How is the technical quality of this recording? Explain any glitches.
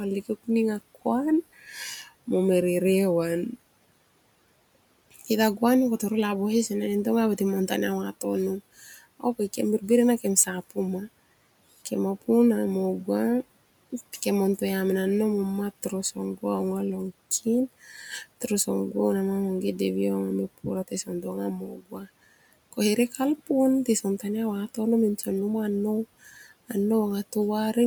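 The recording has one recurring glitch, speech cut by the noise suppressor, at 8.79–8.99 s, 20.88–21.26 s, 21.58–22.08 s and 23.86–24.24 s. Each time, the suppressor mistook part of the speech for background noise and turned it down by about 7 to 19 dB. The deepest cut comes at 21.58–22.08 s, where half a second of speech sounds swallowed and faint. Room noise sits about 25 dB below the speech; it belongs to the recording space, not the system.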